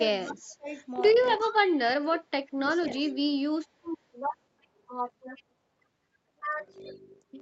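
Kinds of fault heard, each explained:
Speech suppressed in double talk: The talker's level dips in four places, by up to about 30 dB, most deeply from 1.81 to 2.87 s. This likely comes from an echo canceller turning both sides down while the other side was also speaking.
Buffer tearing: From 0.94 s to the end, the speech carries a steady robotic buzz at 50 Hz. This fits a buffer period of 20 ms. A small slice of each period repeats audio from a lap earlier, with hard joins on both sides.
Echo leak: Delayed copies of the speech arrive 367 ms late, near 1.41, 3.01 and 5.37 s. The loudest is about 10 dB below the speech. This is likely leftover loudspeaker pickup that the far side's echo canceller failed to remove.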